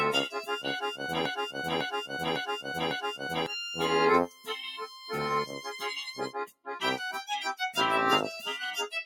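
A speech-tuned noise suppressor runs on this music from start to finish. It treats sustained tones, room sound and reverb as noise and pulls them down. Attacks pass through. Held notes and tails sink. The level swings by roughly 10 dB, so the music pumps and flutters. It sounds thin and unsteady throughout.

From 1.26 to 3.46 s there is a broken-record loop. A fragment of about 0.55 s plays over and over, four times back to back. It repeats exactly. The music that belonged in those two seconds never plays. The likely cause is a stall in the player, encoder or stream, which kept resending the last piece it held.

The suppressor then cuts specific sounds in four places. From 4.27 to 4.49 s a sound drops by about 13 dB. From 4.69 to 5.12 s the drop reaches about 9 dB. From 5.46 to 5.80 s it is about 8 dB. From 6.46 to 6.75 s it is deepest, about 17 dB. Each lasts a fraction of a second. Sustained or decaying sound is hit hardest. 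It ducks suddenly or has its fade chopped short, while sharp onsets survive.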